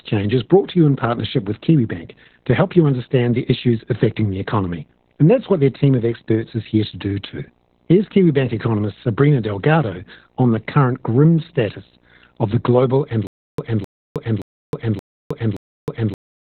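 A speech recording with video or display buzz throughout: a 59.94 Hz field-rate buzz with hash above it, plus a faint 15.7 kHz line-rate whine, sitting roughly 35 dB below the signal. Heavy Opus voice compression runs the whole length. The SILK coder limits the band to about 4 kHz, making the speech muffled, hoarse and slightly robotic, which fits a bitrate near 8 kbps. From 13.27 s, right after "of the global and", a stutter with silent gaps runs to the end. A 0.26 s fragment repeats five times, each followed by about 0.31 s of digital silence, giving a 0.57 s cycle. This is likely a playback or stream stall replaying its last fragment at each retry, so the audio that should have followed is lost.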